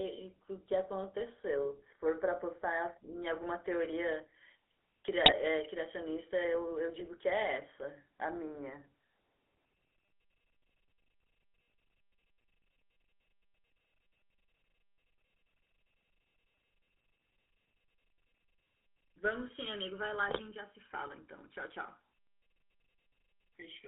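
GSM full-rate codec, throughout: the speech passes through a vocal-tract model driven by regularly spaced pulses, which fits a 13 kbps full-rate channel. The band is held between 300 Hz and 3.5 kHz, and the thinned-out excitation leaves a plainly audible buzzy, gravelly roughness.

GSM bit errors at 5.24 to 5.33 s, 6.95 to 7.09 s and 20.28 to 20.41 s: corrupted filter, pitch and gain values reach the decoder. The spectrum warps and the level lurches for a few frames, so each short stretch breaks into squawks, pops and gargling.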